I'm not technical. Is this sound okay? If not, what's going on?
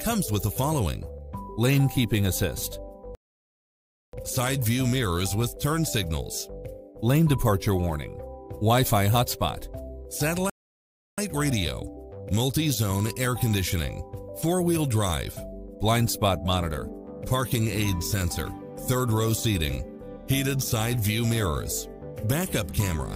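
No. There are two playback stalls: the sound cuts off abruptly and goes silent from 3.15 to 4.13 seconds (about a second) and again from 10.50 to 11.18 seconds (about 0.7 seconds). The likely cause is that the player ran short of data or was briefly held up, so it had nothing to play until it caught up. Unlike a natural pause, the silence interrupts the sound mid-flow, and it lasts far longer than a click.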